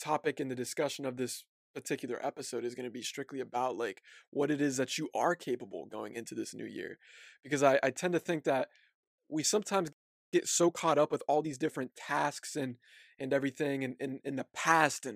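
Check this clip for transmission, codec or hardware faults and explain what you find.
Two related playback faults occur in this speech clip: a playback stall followed by time-compressed catch-up.

At 9.92 s, right after "think that we sometimes", the speech cuts out mid-flow and there is silence for about 0.4 s, until 10.34 s. Then it resumes from where it stopped. This is a playback stall. The likely cause is that the player ran out of buffered data or its audio thread was briefly blocked, so nothing reached the output until it recovered.

From 10.34 s to 11.92 s, ending just before "tasks and and everything", the speech sounds hurried. It runs at 1.25 times normal speed but keeps its normal pitch. This is time-compressed catch-up. To recover the delay left by the stall, the player trims small slices out of the audio and cross-fades across the joins. That shortening causes the rushed pace.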